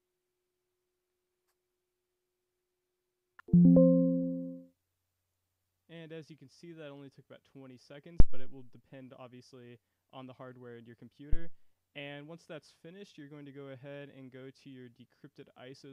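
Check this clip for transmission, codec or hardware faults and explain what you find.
Two phantom power thumps are audible. The first runs from 8.2 to 8.61 s and peaks at about -7 dBFS. The second, from 11.33 to 11.6 s, is weaker at about -16 dBFS. Each one marks a supply being switched on a live input, with the voltage step pushed through the coupling capacitors. The result is a deep low-frequency thump that dies away quickly, over 91 ms in the first event and 61 ms in the second.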